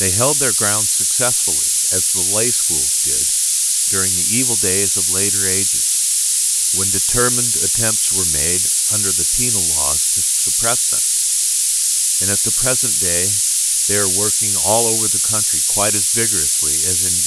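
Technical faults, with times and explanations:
Throughout, low bit depth with noise shaping: the speech is quantised to about 3 bits, and the rounding error is fed back so its energy is pushed toward the top of the band. This leaves a steady, thin hiss, on the order of 10 dB relative to the speech, that grows sharply brighter with frequency. Plain low bit depth would give gritty distortion that follows the speech. Here the hiss stays even and tilted upward.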